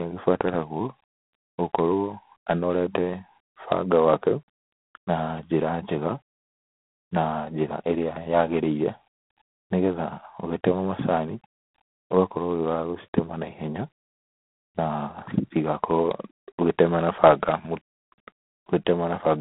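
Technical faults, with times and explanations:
Throughout, G.726 ADPCM: coarse quantization of the prediction error leaves a rasping hiss that follows the speech level, which fits 24 kbit/s; nothing above 3.8 kHz.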